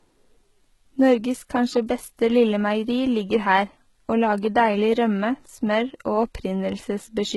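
A speech recording carrying two faults. Across the whole clip the treble is synthetic. Nothing survives above 11.8 kHz, and the upper band sounds gritty and metallic, with sibilants smeared and lispy, because the high frequencies have been rebuilt from copies of the lower spectrum rather than coded directly. The heavy damage points to HE-AAC compression at a very low bitrate, which fits something near 16 kbps, with spectral band replication filling in the top octave so that its harmonics do not line up with those below the crossover. From 0.18 s to 7.30 s there is also a steady train of faint ticks, about ten per second, heard most clearly under the louder, sustained parts of the speech. These are clock slip clicks. Each is a single sample dropped or repeated, likely because two devices run on unsynchronised clocks that differ by roughly 200 ppm, so the timing error reaches a whole sample about every 0.1 s.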